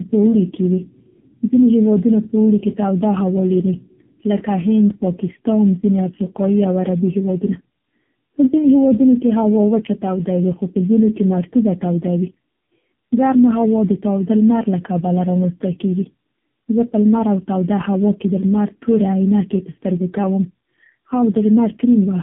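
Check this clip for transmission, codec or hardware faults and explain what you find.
The speech carries one fault from start to finish, tandem speech coding. It sounds rough, muffled and warbly, and there is nothing above about 3.8 kHz. That points to a narrowband call passed through three speech coders in a row, likely an ADPCM link near 24 kbit/s followed by two low-rate AMR-NB stages around 6.7 kbit/s. Each coder re-encodes the previous one's already damaged output, so their artefacts stack.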